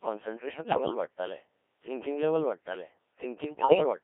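Codec 2 vocoder coding runs through this whole speech recording, and the damage is heavy. The voice is rebuilt from sine waves driven only by pitch, voicing, energy and a coarse spectral envelope, so the original waveform is gone and what remains sounds robotic and buzzy. The density of detail fits the very low 1.3 kbit/s mode. The sound sits in a narrow 300 Hz to 3.4 kHz band.

Bit errors on digital voice radio break it up from 0.53 to 0.94 s, just before "वाडटालें थिंकिंग लॅव्हल", and again from 3.44 to 3.84 s. In each burst, corrupted bits land in the parameters that define whole frames, so pitch, loudness and tone colour jump erratically into warbles, bleeps and gibberish. Each burst spans roughly ten frames. The error rate sounds like about one bit in ten in the first burst and somewhat worse in the second.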